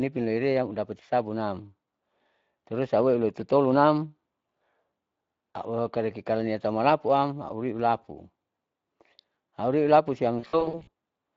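Speex codec damage runs through the whole speech clip. This CELP codec rebuilds the voice from a predicted filter plus a coarsely coded excitation. Here the excitation is starved enough that the damage is plainly audible: the voice has a hoarse, grainy edge. The degree fits a setting around 20 kbps, where too few bits go to the excitation to reproduce the fine detail of the original waveform.

VoIP packet loss concealed by the speech codec occurs from 10.39 to 10.89 s. About 280 ms of audio went missing in scattered gaps across that half second, the longest single gap 60 ms. The pattern points to roughly fourteen lost frames. In each gap the decoder stretched its last pitch and filter and let the level sink, so the sound briefly turns into a fading buzz or coloured noise. Because each frame builds on the previous one, the voice stays weak and smeared between the gaps as well.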